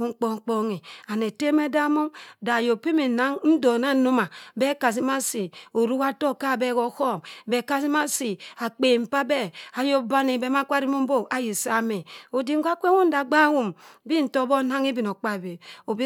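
No technical faults are audible anywhere in the speech.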